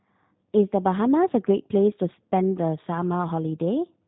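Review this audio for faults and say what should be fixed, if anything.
G.729 codec damage runs throughout. The speech is rebuilt from a vocal tract filter, pitch predictor and sparse pulses in 10 ms frames, so it sounds plainly rough and synthetic, with nothing above 3.8 kHz, which fits the 8 kbit/s G.729A mode. To prevent this, record or route the audio through a wideband or full-band codec at a higher bitrate.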